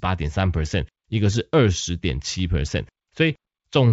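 Speech sent over a G.722 wideband link at 64 kbit/s has bit errors on an ADPCM link from 3.30 to 3.36 s. At a low error rate, around a tenth of a percent, flipped bits upset the decoder's step size and predictor. The damage rings on as pops and a rough burst with brief level changes, which fits about two corrupted frames. On a spectrogram this appears as a short vertical broadband smear. On the waveform it shows as jagged, uneven jumps in the envelope.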